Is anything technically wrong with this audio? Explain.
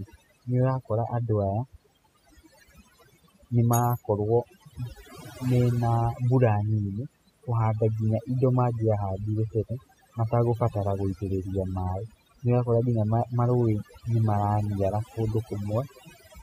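Yes. The speech carries overdone noise removal from start to finish. A noise reduction stage set far too aggressively is cutting individual frequency bands whenever their level sits near its noise estimate, and it catches the quieter parts of the voice as well. Between phrases the background drops to near silence dotted with twinkling, chirpy specks. On a spectrogram, the gaps show isolated flickering dots of energy and the speech has ragged, holey harmonics.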